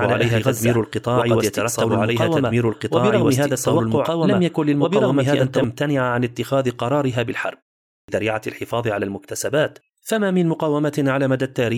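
From the first instant to 5.64 s, the speech carries a doubled audio track: a second, equally loud copy trails about two seconds behind. It is likely a slower capture path or a misaligned edit. Unlike an echo, the copy is dry, with no decay or room colour, and it stops abruptly.

At 8.01 s, after a 0.47 s pause, there is a clipped start after a pause. The output device, asleep in the silence, takes about 74 ms to wake, so the speech begins abruptly with its opening sounds missing. Silence in muted pauses, by contrast, costs no speech.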